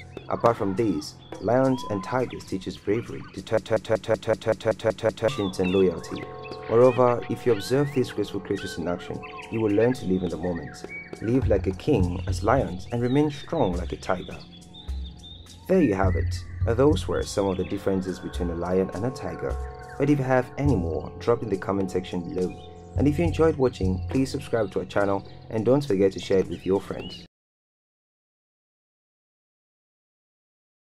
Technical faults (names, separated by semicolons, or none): broken-record loop